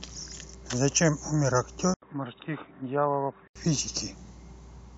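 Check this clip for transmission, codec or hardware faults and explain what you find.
One fault: from 1.94 to 3.56 s the speech turns dull and boxy, likely an input switched to a poorer device. An 80 ms gap marks the switch. The spectrogram shows nothing above 3.8 kHz and a faint new noise floor, and the waveform drops about 5 dB.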